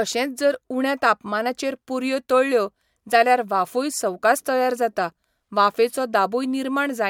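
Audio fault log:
No fault can be heard anywhere in the speech. Nothing in the recording calls for an entry in this log.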